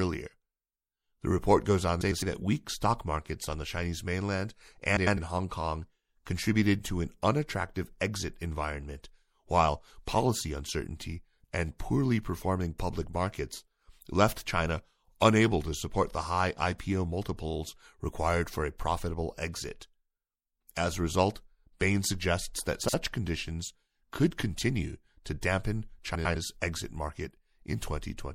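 Throughout, the speech sounds watery and swirly with smeared attacks, likely from MP3 compression around 64 kbps; a spectrogram shows a hard treble cutoff and flickering high-frequency patches. At 2.01 s (after "report goes on", before "that weak stock markets"), 4.96 s, 13.09 s (after "and poorly performing public"), 22.83 s and 26.14 s (after "could continue to dampen"), frames out of order swap two adjacent blocks of about 105, 105, 26, 52 and 105 ms, giving a garbled flutter. On the waveform, these appear as abrupt envelope discontinuities.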